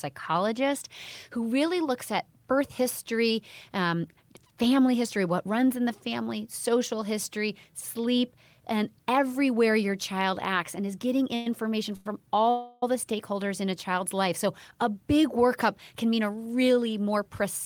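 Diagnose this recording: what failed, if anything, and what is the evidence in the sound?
At 11.35 to 11.47 s and again at 12.50 to 12.83 s, the speech hangs on a fading continuation of its last sound for about 0.1 s and 0.3 s, then resumes where it stopped. This call audio freeze is a network-stage fault, likely packets delayed until the jitter buffer emptied.

From 11.96 to 12.06 s, one sound is held about 94 ms too long with a slight buzz or dip before the speech carries on. This short stall from a late packet means the receiver's buffer had nothing due, stretched the previous audio, and lost nothing.

Between 15.41 and 17.42 s, the speech runs hurried at unchanged pitch, about 8% fast. This jitter buffer speed-up happens when the receiver, holding excess audio after the earlier delays, trims repeated pitch-period slices, removing roughly 0.15 s to restore its target latency.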